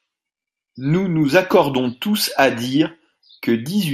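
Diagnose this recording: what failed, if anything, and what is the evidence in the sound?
The speech sounds dull and muffled across the whole recording, with a gurgling, granular texture and upper frequencies that flicker in and out. The failure sits at the codec stage and is most likely MP2 compression at a low bitrate; the damage points to something like 80 kbps. MPEG Layer II divides the spectrum into 32 equal sub-bands and rations bits among them, so the upper bands are shut off intermittently while the remaining bands are coarsely quantised.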